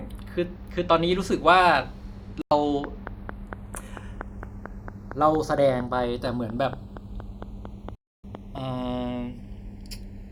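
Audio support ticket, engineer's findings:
Slow flanging across the whole clip when summed to mono, a sweeping hollow swirl. Channels drifting apart: the two sides appear to run on separate clocks, roughly 50 ppm apart, so the interchannel delay creeps to under half a millisecond by the end. That moving offset drags comb-filter notches slowly through the spectrum. Check clock sync between the two capture devices.

Digital broadcast dropout, two events. Hard mute from 2.42 to 2.52 s, a 96 ms hole, then audio resumes mid-programme. Longer mute from 7.95 to 8.24 s, 288 ms lost. The receiver lost lock or rejected corrupted frames and held silence until clean frames returned. The gap lengths point to about three and nine lost frames. Content in the gaps is unrecoverable. Inspect RF path and reception margin.

Train of clicks from 2.84 to 8.59 s: steady ticking at about 4.4 per second, evenly spaced, around thirty in all, peaking about 10 dB above the programme and audible in pauses too. 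Uniform shape and regular pace make interference from nearby equipment or a faulty connection or power supply the likely cause. Check grounding and interface buffers.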